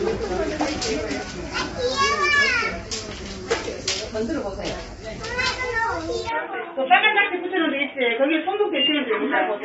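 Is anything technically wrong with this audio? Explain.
Yes, two things. Throughout, the audio has plainly audible low-delay AAC compression damage: grainy, rough texture with noise filling the gaps between tonal components, and nothing above 7.7 kHz. Short codec frames resolve detail poorly, and this sounds like AAC-ELD at around 24 kbps.

From 6.29 s to the end, the band suddenly narrows to nothing above 3.8 kHz, so the sound turns dull and boxy, with a faint new noise floor well underneath. There's no gap and no real level jump. That's likely the input switched to a poorer device.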